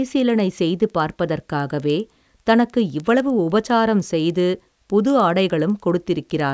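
Throughout the speech, a resampler restarted on every block leaves small ticks every 100 ms, a steady 10 Hz pattern, likely from a 48 kHz to 16 kHz conversion. Each block edge lacked its true neighbours. A spectrogram shows faint vertical lines at 100 ms spacing, only where sound is present, and the waveform shows tiny steps.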